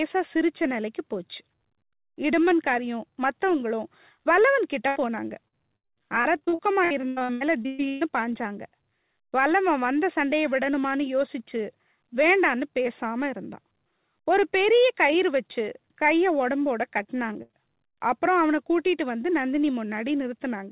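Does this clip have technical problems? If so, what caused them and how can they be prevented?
Yes. Repeated packet loss (robotic sound) occurs from 4.88 to 8.03 s and again from 17.03 to 17.97 s. Packets kept arriving late or not at all, and each hole was patched by stretching the preceding sound. This makes the speech choppy, with pieces missing. About a third of the first stretch is concealed, with gaps up to 121 ms. About a fifth of the second is concealed, with gaps up to 67 ms. The narrowband call path, with nothing above 4 kHz, which fits G.711, keeps the sound muffled throughout. To prevent this, use a more stable network connection and a larger adaptive jitter buffer, or enable forward error correction.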